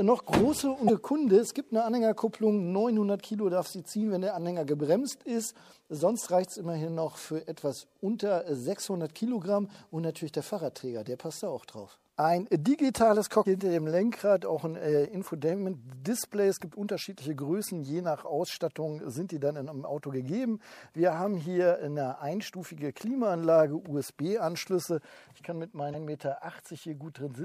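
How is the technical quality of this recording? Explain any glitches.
Three short glitches from damaged data in a compressed stream break up the recording, at 0.85 to 0.90 s, 13.42 to 13.46 s and 25.90 to 25.95 s, each about 40 ms long and spaced roughly 12.5 s apart. Where the stream's bytes are corrupted, the decoder misreads those frames, loses sync and hunts for the next valid frame header, producing a brief chirp, squawk, click or short hole. Each burst lasts a few tens of milliseconds.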